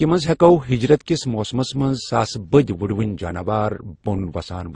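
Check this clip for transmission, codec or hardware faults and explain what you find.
One codec fault runs through the whole speech clip. Transcoding between lossy codecs: nothing is heard above 9.7 kHz, and the dull, swirly coding texture seems layered. This likely comes from a low-rate MP3-style encode re-encoded as low-rate Opus, each stage adding artefacts and the lower cut-off persisting.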